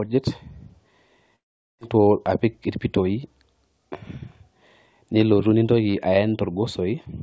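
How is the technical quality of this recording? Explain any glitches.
There's one real glitch in this speech recording, a long network dropout from 1.36 to 1.83 s. The audio stops arriving, and the receiver smears the last bit of sound into a fading buzz before settling into near-silence for about 420 ms. Roughly 400 ms of the original never comes back. When the audio resumes it just picks up further along, with a slight timing shift. That pattern is most likely a packet stall on the network rather than anything at the microphone. The call path itself is audible too: nothing comes through above 8 kHz, which fits G.722 at 64 kbps.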